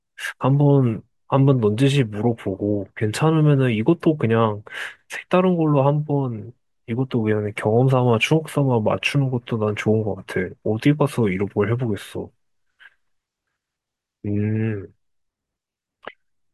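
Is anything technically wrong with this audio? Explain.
No, the recording shows no technical faults; the signal stays stable and intact throughout.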